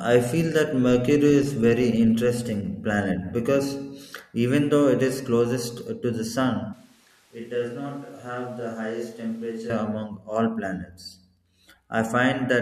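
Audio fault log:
6.73–9.70 s, switch to a distant microphone. The speech turns suddenly roomy and hollow, with thinner bass. It drops about 10 dB, and room noise rises to roughly 30 dB below the speech. The close microphone likely dropped out, leaving a farther one. It snaps back at 9.70 s.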